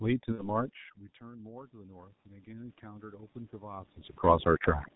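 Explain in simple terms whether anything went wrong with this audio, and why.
Overdone noise removal runs through the whole clip. A noise-cleaning step was set far too strong, so it shuts off any frequency band that sounds close to the background hiss. Quiet parts of the speech get cut too, leaving near-silent gaps with faint twinkling specks.

The G.723.1 codec also affects the whole recording. This early internet-phone format squeezes speech into very little data, cuts everything above 4 kHz, and slowly adapts its model of the voice. Here the damage is heavy: the speech is muffled and hoarse, with smeared consonants.

VoIP packet loss concealed by the speech codec occurs from 0.32 to 0.56 s. Two chunks of audio, about 60 ms in total, never arrived. The decoder filled the hole by stretching out the last sound it had into a fading buzzy tone or coloured noise. Because each new chunk builds on the one before, the speech stays weak or distorted for a while after the audio returns.

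Automatic gain rising runs from 1.19 to 4.25 s. The input got much quieter; the talker also shifted position at the microphone around 0.5 s and around 3.5 s. The automatic volume control responded by slowly turning itself up, so the voice and the background noise swell together over those three seconds.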